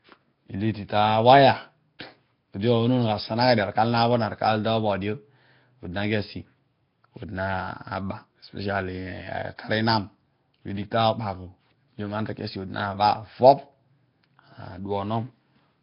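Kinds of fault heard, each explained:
Nellymoser compression: The speech sounds rough and underwater throughout, with a hissy halo, heavy smearing and nothing above 5.3 kHz. The likely cause is Nellymoser Asao coding, which quantises short blocks so coarsely that weak bands become filled noise, fitting roughly 22 kbps.
Pre-echo: At 1.99 s a brief hiss leads a sharp onset by about 12 ms, and the attack itself lands softened. The codec spreads its coding noise across an entire block, so noise sized for the loud attack also fills the quiet moment before it.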